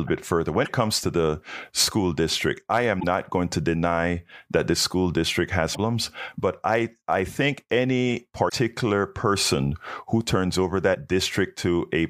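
Five short bursts of damaged data in a compressed stream break up the speech at 0.64–0.69 s, 2.97–3.04 s (after "the school district I", before "not going to deny"), 5.71–5.77 s (after "that the school district"), 8.45–8.53 s (after "I I think any"), and 10.91–10.96 s. Corrupted bytes make the decoder misread those frames and lose sync until it finds the next valid header, so each gap of about 40 to 80 ms sounds as a brief chirp, squawk, click or short hole.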